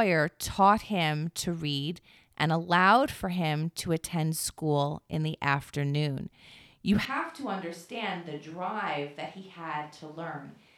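At 7.05 s the speech abruptly turns roomy and hollow, loses bass, drops by about 10 dB and gains room noise around 30 dB below it, lasting to the end. This is likely a switch to a distant microphone: unlike a plain gain drop, the tone changes too.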